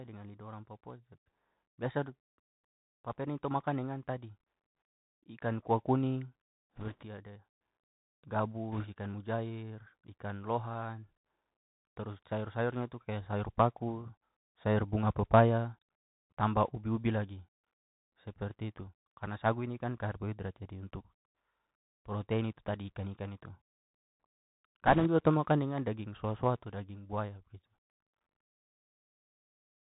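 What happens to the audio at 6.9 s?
Around there, from 6.76 to 7.05 s, you get a burst of bit errors on the Bluetooth voice link. A couple of percent of bits are flipping, but since each CVSD bit only nudges the waveform a small step and errors fade quickly, there are no hard clicks, just a rushing, crackly noise over the speech.

That sits on top of the Bluetooth CVSD headset codec running the whole time. At 64 kbps it tracks the waveform one up-or-down bit per sample with an adapting step, so nothing gets past 4 kHz, s sounds turn scratchy, loud bright bits distort, and a granular hiss stays underneath.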